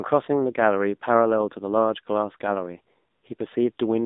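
Speech here has passed through the AMR narrowband mobile codec for its whole length, at a rate that sounds like about 7.4 kbps. The codec samples at 8 kHz and rebuilds the voice from a vocal-tract model fed by sparse pulses, so the band sits roughly between 200 Hz and 3.7 kHz with nothing above. At this low rate the damage is plainly audible: a buzzy, synthetic edge on the voice and a thin, telephone-like tone.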